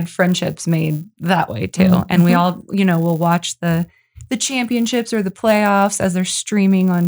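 Throughout the speech, a resampler restarted on every block leaves a small error at each edge of 10 ms blocks, consistent with conversion from 24 kHz to 48 kHz. The edges repeat at 100 Hz, so it sounds like a low buzz riding on the speech and dropping out in pauses.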